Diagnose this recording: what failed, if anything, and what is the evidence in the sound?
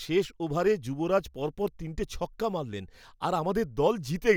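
Nothing failed; no faults heard.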